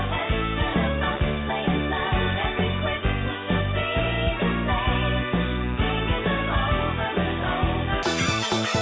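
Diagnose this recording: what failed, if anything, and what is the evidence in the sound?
The wrong sample rate kicks in at playback from 8.03 s to the end: sound runs twice as fast and a full octave high, which fits 8 kHz material played at 16 kHz.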